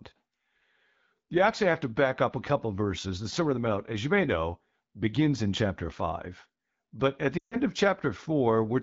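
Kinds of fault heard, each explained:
Lost AMR speech frames: from 7.38 to 7.59 s the wideband AMR decoder, whose speech is clear at 12.65 kbit/s, gets no usable frames. It repeats its last pitch and vocal tract settings at falling gain, so the sound drops to near silence within two frames of a gap lasting about 140 ms, roughly seven 20 ms frames.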